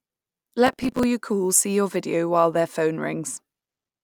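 From 0.67 to 1.03 s the processor falls behind and cannot fill its short audio buffers on time, missing deadline after deadline in a row. Each miss plays back a scrap of old audio with hard edges in place of the speech. The repeats come quickly enough to suggest buffers of around 5 ms, perhaps fifteen or so missed over that stretch. The result is processor overload crackle, a gritty tearing laid over the speech that stops as soon as the load eases.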